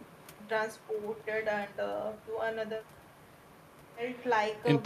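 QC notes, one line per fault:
No faults heard anywhere in this speech recording.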